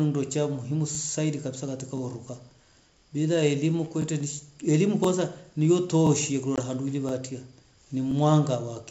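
Overlapping chunks: the audio was processed in one-second blocks, each starting about 23 ms before the previous block ended, so that sliver plays twice. The result is a regular stutter at 0.95 s (just after "ndo cha umuhimu"), 1.97 s, 3.00 s (just before "bila elimu"), 4.02 s, 5.04 s (after "nishi elimu") and 6.07 s.

Packet loss on an ADPCM call: at 6.56 to 6.60 s a single packet of about 20 ms is lost, leaving a hard-edged silent hole. The decoder's predictor loses step with the sender, so the speech comes back with brief distortion.

The chunk stutter then continues at 7.09 s and 8.11 s. The wideband telephone coding underneath carries faint upper-band hiss and points to G.722 at 64 kbit/s.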